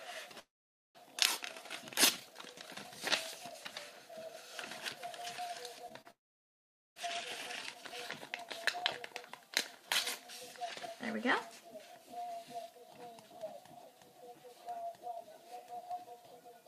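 At 0.39 s the audio cuts out until 0.97 s. A brief fading buzz gives way to about half a second of silence. This is likely a long network dropout. At 5.89 s and 6.01 s, short concealed packet loss leaves brief smears. About 20 ms and 40 ms went missing, patched by extending the preceding sound. From 6.11 s to 6.98 s a second likely long network dropout leaves about 0.8 s of silence. The lost audio never returns.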